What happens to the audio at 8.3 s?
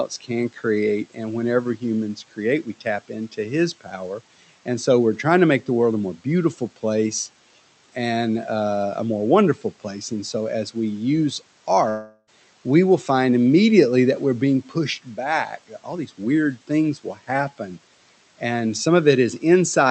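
Nothing goes wrong at 8.3 s: the speech carries on intact through that moment, with only the room noise underneath it and the usual character of the call codec.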